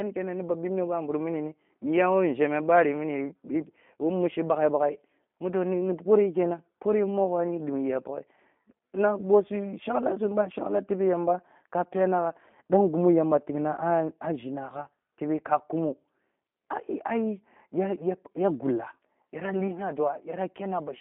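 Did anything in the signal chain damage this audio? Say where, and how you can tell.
Yes. G.729 codec damage runs throughout, at the codec stage. The speech is confined to a telephone band of about 200 Hz to 3.5 kHz and sounds plainly rough and synthetic, as the codec rebuilds each frame from a vocal tract filter, pitch predictor and sparse pulses, which fits an 8 kbit/s G.729A link.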